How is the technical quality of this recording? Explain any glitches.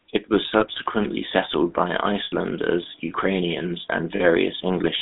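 The recording is noticeably degraded, with coding damage throughout and three short dropouts.

GSM full-rate codec: The speech went through the original GSM full-rate codec, which fits a 13 kbps voice channel. It rebuilds the vocal tract from sparse pulse excitation, leaving a plainly audible buzzy, gravelly texture, and the line passes only about 150 Hz to 3.7 kHz, so the sound is thin and telephone-like.

Lost GSM frames: At 0.60 to 0.66 s (just before "settled by"), 2.24 to 2.33 s (just after "settled by"), and 4.16 to 4.23 s, frames were lost and concealed by repeating the last good frame. The gaps last 20, 80 and 40 ms and are heard as a brief rough, metallic ring.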